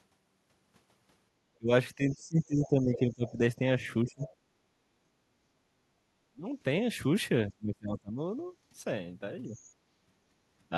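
From 1.58 to 4.26 s the speech dips and breaks up, about 25 dB down at worst. This is speech suppressed in double talk, likely the echo canceller turning down both talkers at once. From 2.1 to 3.33 s, and faintly from 4.07 to 4.29 s, a second voice comes through. That is the other side's voice leaking through, likely loudspeaker echo the canceller left in. At 4.54 to 4.64 s the room sound drops by about 9 dB for a tenth of a second, background gated by the echo canceller. The same double-talk suppression returns at 6.32 to 6.47 s, 7.49 to 8.21 s (about 30 dB deep) and, more lightly, 9.45 to 9.58 s.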